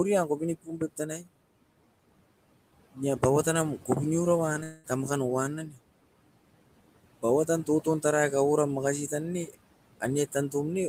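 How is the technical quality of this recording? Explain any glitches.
The recording has noise suppression trouble throughout, three spots where the speech itself is clipped, and one long break in the audio.

Noise suppressor artifacts run through the whole clip. The suppressor pulls steady background down by about 18 dB, so the residual noise pumps between phrases.

Speech cut by the noise suppressor occurs at 0.56–0.99 s, 1.18–1.29 s and 5.67–5.79 s. Quiet speech was mistaken for noise and lowered by about 17, 15 and 11 dB, so those sounds come across as swallowed.

A long network dropout runs from 4.63 to 4.86 s, just before "tamakan nou". Roughly 200 ms of audio never arrived, likely lost packets, and the gap is filled by a fading continuation of the last sound rather than silence.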